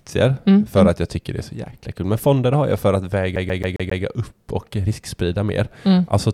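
From 3.36 to 4.03 s, a CD stuck on one turn replays a 135 ms slice of speech five times, each jump marked by a brief mute, unlike smoother digital buffer loops.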